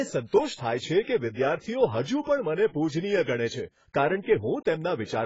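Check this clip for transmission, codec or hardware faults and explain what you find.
One codec fault runs through the whole speech clip: AAC compression. For the entire duration nothing sits above 7.6 kHz, and sibilants fizz and warble. This likely comes from AAC-LC at a very low bitrate, consistent with about 16 kbps, where the quantiser discards high bands and starves others. A spectrogram shows a hard ceiling at 7.6 kHz with patchy, holed bands beneath it.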